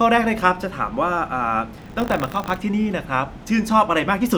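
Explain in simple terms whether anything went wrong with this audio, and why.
From 1.76 to 2.56 s the speech takes on a robotic 50 Hz buzz. This is buffer tearing: playback slipped, splicing in a small slice of slightly older audio, suggesting a 20 ms buffer.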